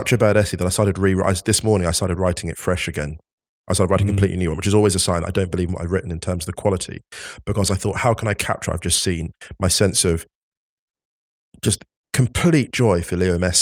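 No technical faults can be heard anywhere in the recording; the signal holds steady throughout.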